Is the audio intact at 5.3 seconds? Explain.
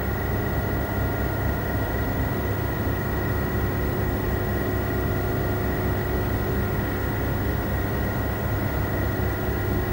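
No. At 5.3 seconds, as throughout the clip, a screen or video cable is coupling its signal into the audio path, producing video or display buzz. The picture's 50 Hz field rate becomes a steady buzz with gritty hash riding above it, and the line scanning adds a thin, very high whine at 15.6 kHz. The interference sits only about 10 dB below the wanted sound, so it stays plainly audible under it.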